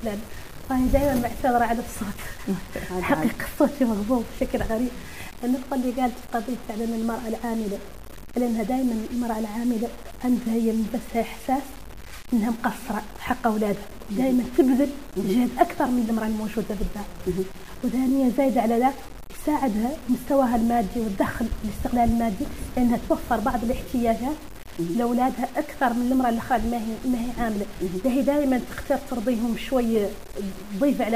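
Throughout, the audio was likely reduced to about 6 bits and truncated with no dither, which is low bit depth without dither. The error tracks the signal, so sound carries a grainy, shifting distortion roughly 20 dB down, and anything below one step sputters or drops out.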